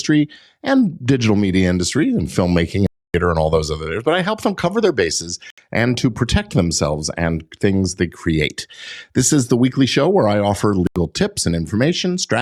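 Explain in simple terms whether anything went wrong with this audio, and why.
The speech cuts out three times, in what sounds like Bluetooth dropouts: at 2.87 to 3.14 s after "media industry and filmmaking", at 5.50 to 5.58 s after "them cover their bases", and at 10.87 to 10.96 s after "show where I offer". The likely cause is data not reaching the headphones in time. The sound then resumes further on, as if it had played through the gap.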